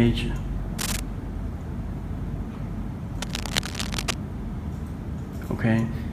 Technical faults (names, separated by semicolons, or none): cable scratch noise